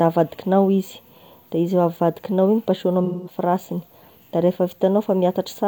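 A speech clip with AAC frame loss with concealment from 3.04 to 3.36 s: for about 0.21 s the decoder rebuilds the audio from the last good spectrum, giving a smeared, noisy patch. This span fits roughly five lost AAC frames, and the patch is filled rather than being a hard cut to silence.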